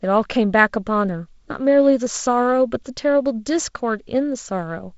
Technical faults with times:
none

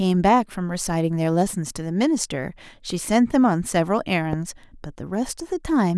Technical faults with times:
4.33-4.35 loud pop

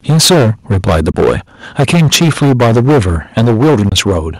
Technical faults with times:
0.09-1.36 microphone overload
0.10 microphone volume stepped down
1.12-1.14 Bluetooth dropout
1.79-4.17 microphone overload
3.39 microphone volume stepped down
3.89-3.92 Bluetooth dropout

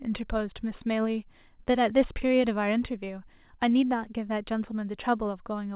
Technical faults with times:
none

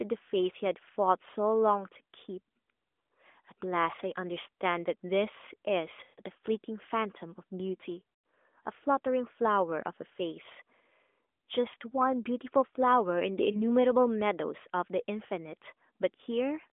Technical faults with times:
6.04-6.19 lost AMR speech frames
8.14-8.24 lost AMR speech frames
13.52-13.63 lost AMR speech frames

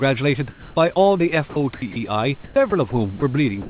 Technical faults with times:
0.50-0.76 comfort noise in place of the background
1.50-1.96 sound dropped by the voice detector
2.44-2.56 comfort noise in place of the background
2.70-2.72 sound dropped by the voice detector
3.20-3.22 sound dropped by the voice detector
3.62-3.69 comfort noise in place of the background

